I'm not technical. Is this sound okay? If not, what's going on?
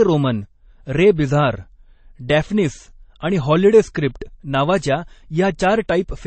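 No. From start to finish the speech sounds dull, with nothing above about 8.4 kHz. The likely cause is transcoding between lossy codecs: the audio was squeezed twice in a row, and each pass added its own blurring on top of the last.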